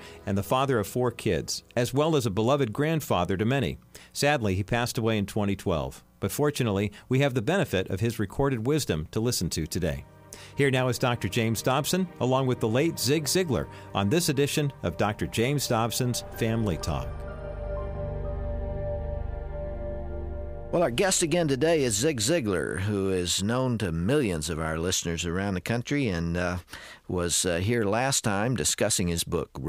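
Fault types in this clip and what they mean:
No faults can be heard.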